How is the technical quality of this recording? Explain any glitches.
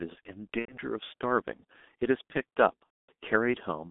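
The recording is heavily degraded: the whole clip is band-limited, low-rate coded speech, and it has two audible dropouts where lost audio was filled in by the decoder.

G.723.1 codec, throughout: the speech sits in a narrow line band from roughly 200 Hz to 3.6 kHz, with nothing above. The damage is heavy, and the thin, rough texture points to the 6.3 kbit/s mode. The codec models the vocal tract in coarse 30 ms blocks, so fast articulation gets averaged away. The result is muffled, hoarse speech with smeared consonants.

VoIP packet loss concealed by the speech codec, at 0.59 to 0.77 s and 2.90 to 3.09 s: about 90 ms of audio is missing at the first point and about 240 ms at the second. That fits roughly three and eight 30 ms frames. For each missing frame, the decoder repeats its last pitch and spectral shape at falling gain. The gap is filled with a drawn-out buzzy tone or coloured noise that fades, and from the third lost frame in a row the sound is muted. 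Because each frame builds on the previous state, the speech stays weak or distorted for tens of milliseconds or more after real audio resumes.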